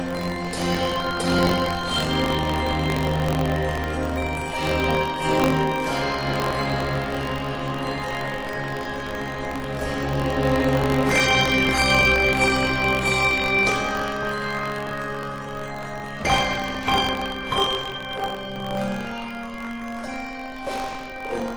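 Buffer tearing runs through the whole clip, heard as a steady rattling buzz near 46.9 Hz that rides on the sound and drops away whenever the signal does. The writer and reader of the output buffer have drifted into each other, so every period holds a small slice, a few percent, of stale audio from about 40 ms earlier, hard-cut on both edges. The repeat rate fits a 1024-sample buffer.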